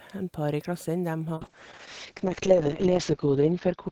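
A call bitrate drop begins at 1.36 s, just after "par i klassen dem", and lasts to the end. The encoder, starved of bits, codes coarsely and trims bandwidth from 20 kHz to 8 kHz. The speech turns muffled and rough, fitting a fall from 32 to 6 kbps.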